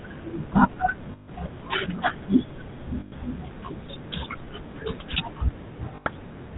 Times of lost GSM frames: 1.12-1.30, 3.00-3.13, 5.96-6.07

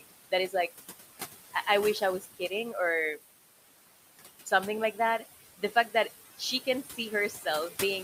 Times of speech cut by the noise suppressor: 2.20-2.51, 6.83-6.98, 7.30-7.46

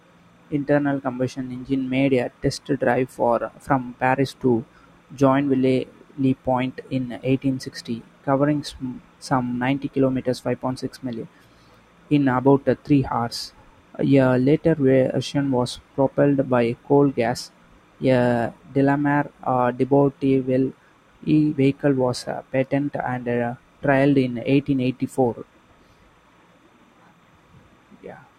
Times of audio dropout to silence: none

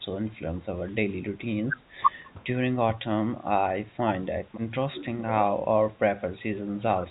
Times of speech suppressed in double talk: 0.01-0.05, 0.89-1.12, 2.97-3.03, 5.91-5.97, 6.63-6.74

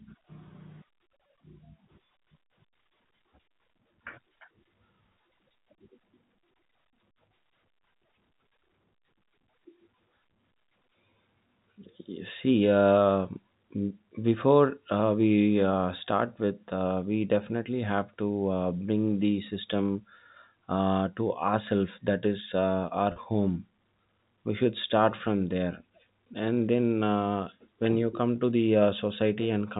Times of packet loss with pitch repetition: 23.12-23.16

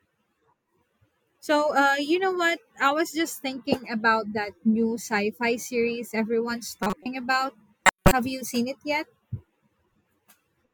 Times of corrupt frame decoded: 6.83-7.06, 7.85-8.12

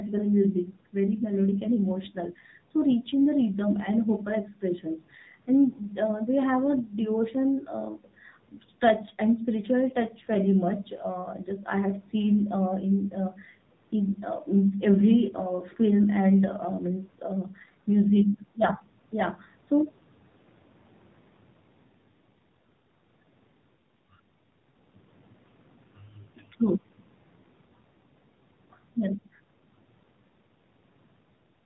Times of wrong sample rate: none

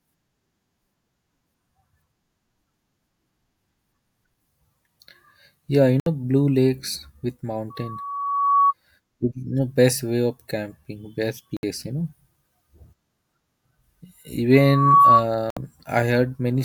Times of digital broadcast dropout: 6.00-6.07, 11.57-11.63, 15.50-15.57

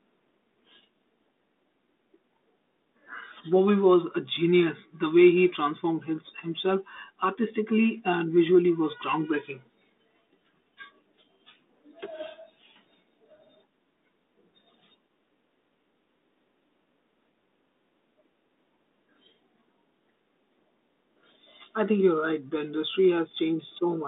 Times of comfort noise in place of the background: none

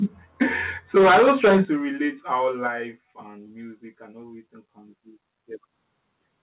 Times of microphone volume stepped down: 0.43, 1.65, 2.67

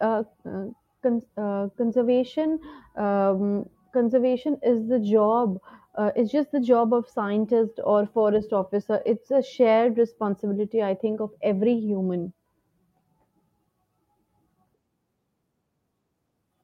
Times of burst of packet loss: none

